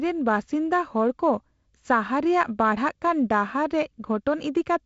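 Nothing stood out on listening to this speech clip, which comes across as ordinary wideband telephone audio with its top end stopping short of 8 kHz.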